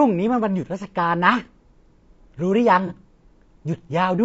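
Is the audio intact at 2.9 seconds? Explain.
No. AAC frame loss with concealment hits from 2.87 to 2.92 s. About 30 ms of coded audio, consistent with a single lost frame, never arrived. The decoder patched the gap by reusing and scrambling the last good spectrum, so that instant sounds smeared, noisy and phasey rather than clean.

Low-delay AAC compression also runs through this moment, as it does across the whole clip. The speech sounds plainly rough and grainy, with noise filling the gaps between harmonics and a synthetic-sounding top band. The likely cause is AAC-ELD's short frames at a low bitrate, consistent with around 32 kbps.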